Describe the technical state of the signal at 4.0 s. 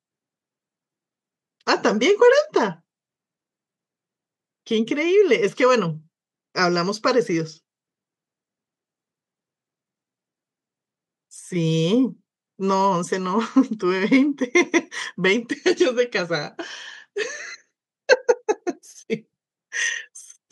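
At 4.0 s the speech signal is intact, with no audible technical fault at that moment.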